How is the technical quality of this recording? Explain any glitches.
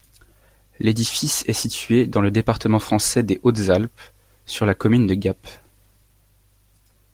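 There's nothing here that counts as a glitch, so you can relax: the recording holds together with no dropouts, clicks or other faults to point out.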